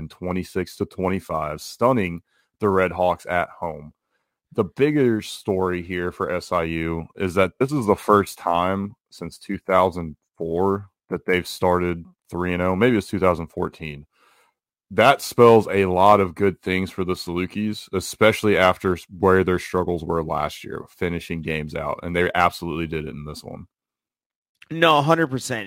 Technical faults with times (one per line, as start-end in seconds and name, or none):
0.00-25.67 sample clock jitter